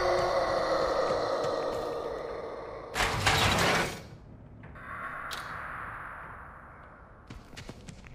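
No technical faults can be heard anywhere in this audio.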